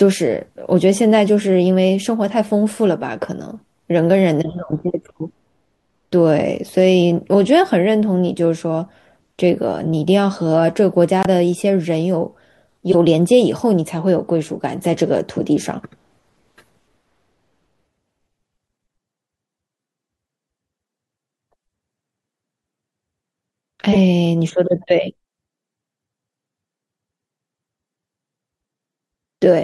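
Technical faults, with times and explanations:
4.88 to 4.90 s, 12.92 to 12.95 s, 15.37 to 15.41 s and 23.92 to 23.97 s: corrupt frame decoded. Each is a short burst of misplaced energy, 25 to 45 ms long, that cuts into the speech. Damaged bits reached the decoder, and it played them. Wrong gains and misread codes put sound at frequencies where it does not belong. The first blip is fairly quiet, near -15 dBFS. The middle two are loud, and the last is louder still.
11.21 to 11.26 s: corrupt frame muted. The speech drops abruptly into a 50 ms silence. That length fits about three consecutive frames that the decoder rejected as damaged. The player put silence in their place instead of guessing at the content, so the speech stops dead. Timing is kept, so nothing after the gap shifts or skips.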